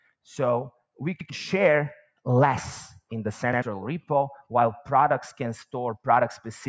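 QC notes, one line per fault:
1.21 s and 3.53 s, repeated buffer: at each point a short stutter is heard. A slice of about 93 ms plays twice in a row with a hard join at the repeat. The playback device ran out of fresh audio in time and replayed its last buffer once, which fits a 4096-sample buffer. About a tenth of a second of sound is skipped at each event, so part of the material after the stutter is missing.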